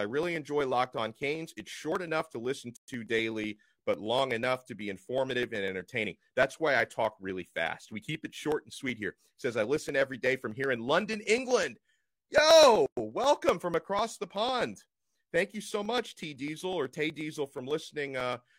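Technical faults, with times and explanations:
0.11 to 18.45 s, periodic USB or driver dropouts: about half a millisecond is skipped every 0.124 s. This gives steady ticks wherever speech is present.
1.92, 8.02 and 17.1 s, dropped buffer (overrun): a jump forward, with about 20 ms of speech missing. The likely cause is samples overwritten before they were collected.
2.77 to 2.88 s and 12.86 to 12.97 s, gap at a join of encoded pieces: gaps of 115 and 112 ms, 10 s apart. The encoder's start delay and end padding remain at each join.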